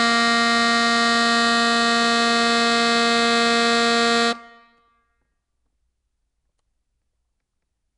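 From start to end, the music carries plainly audible codec damage. Nothing reaches above 10.7 kHz, so the top is cut clean off. A rough, hissy halo hangs around the sound, and the whole mix feels smeared and underwater. The likely cause is Nellymoser compression, the old Flash codec. It codes short blocks at a fixed bit budget. Weak bands get no bits and are filled with noise. The damage fits a rate near 44 kbps.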